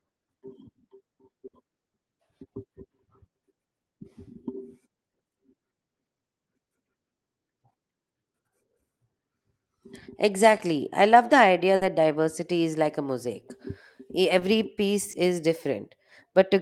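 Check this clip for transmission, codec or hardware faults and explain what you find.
The speech has two kinds of network fault, both from packets lost on the call path.

Burst of packet loss at 1.47–1.55 s and 11.75–11.83 s (between "I love the idea" and "diversity is like a"). The receiver extended the last sound for about 60 ms, fading it, then skipped about 60 ms ahead, leaving a held buzz or fading hiss and a small jump.

Short concealed packet loss at 10.57–10.61 s (just before "I love the idea"), 14.39–14.43 s (just before "piece is") and 15.11–15.15 s. About 20 ms was synthesized from the preceding sound and blended back in, giving brief smears or wobbles.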